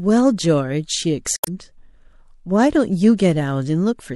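Speech, with plainly audible codec damage throughout. It sounds watery and dull, with swirling treble, which likely points to MP3 compression at around 64 kbps. From 1.35 to 1.48 s there is a brief glitch, a sign of damaged data in a compressed stream. The decoder loses sync.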